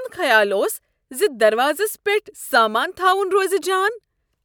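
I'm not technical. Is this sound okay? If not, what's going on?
Yes, no technical faults are audible anywhere in this speech recording.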